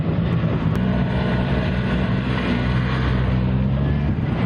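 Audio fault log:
Throughout, gain pumping: the input gain was likely set far too high for the microphone, so a fast limiter or compressor keeps clamping down each time a loud sound arrives and releases again as it fades. The level swings by roughly 5 dB, while the loud and quiet parts sit unnaturally close together and the whole sound feels squashed.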